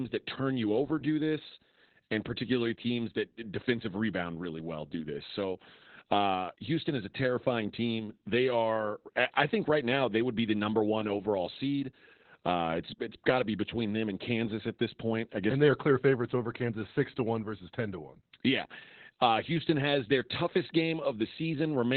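A speech clip with Opus voice compression throughout. Nothing is heard above about 4.2 kHz, so the band is cut to narrowband. Speech sounds muffled, hoarse and slightly robotic from heavy coding damage. This fits the SILK coder at a very low bitrate, around 8 kbps, with a coarsely coded excitation.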